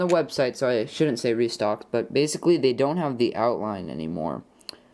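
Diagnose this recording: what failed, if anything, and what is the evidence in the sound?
Nothing in the recording stood out as a fault on listening.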